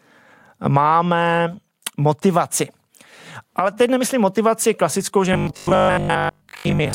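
From 5.33 to 6.93 s, right after "nemyslím motivaci klasickou že", the speech turns into a rigid metallic buzz at a fixed 50 Hz: robotic sound from repeated short buffers. It's likely starved input, with a 20 ms chunk looped over most of the stretch while the real audio gets skipped.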